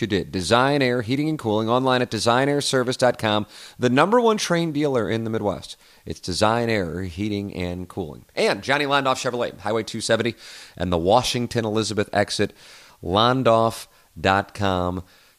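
No technical faults are audible anywhere in the speech recording.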